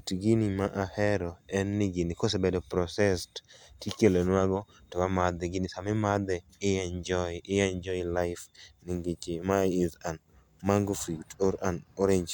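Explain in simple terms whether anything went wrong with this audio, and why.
Nothing went wrong here.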